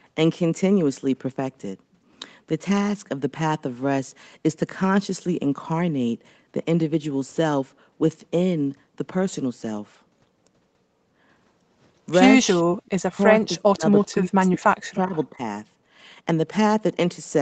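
A speech recording carried over a call, band-limited with nothing above 8 kHz. At 12.7 to 12.76 s the background is gated by the echo canceller. The room sound drops out sharply, by about 40 dB at its deepest, for roughly 70 ms. The canceller clamps the microphone while the loudspeaker plays, then releases it, and the ambience snaps back. There are two brief echo leaks, at 12.86 to 12.9 s and at 13.99 to 14.03 s. Each is a faint copy of the speech arriving 389 ms late. The first sits around 40 dB below the speech and the second a little higher, around 35 dB below. These are likely residual loudspeaker pickup that the echo canceller failed to remove and that was sent back down the line. The speech is also suppressed in double talk, at 13.07 to 13.17 s and across 13.36 to 15.41 s. The voice dips hard, by up to about 40 dB. The losses total roughly a tenth of a second in the first stretch and about a second and a half in the second. 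The likely cause is both sides talking at once, which left the canceller unable to separate the local talker from the echo, so it turned everything down.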